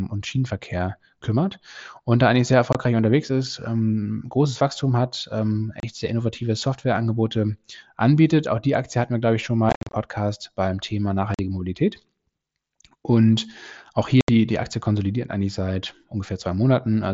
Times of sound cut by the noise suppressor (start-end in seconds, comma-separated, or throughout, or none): none